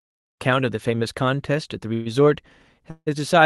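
At 1.93 s the speech stalls into a fading buzz until 2.08 s, and again at 2.90 s until 3.09 s, where the buzz dies into about 40 ms of silence. These are call audio freezes, likely caused by delayed packets draining the jitter buffer, so the receiver stretched the last sound to fill 122 ms and then 162 ms. Nothing is lost; speech resumes late. A spectrogram shows smeared, decaying horizontal bands; the waveform shows a tapering tail.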